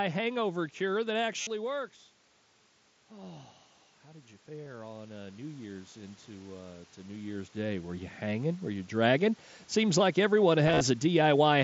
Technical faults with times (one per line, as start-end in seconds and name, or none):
1.41-1.47 concealed Bluetooth headset packet loss
4.06-5.93 automatic gain rising
4.65 concealed Bluetooth headset packet loss
7.05 concealed Bluetooth headset packet loss
10.67-10.81 concealed Bluetooth headset packet loss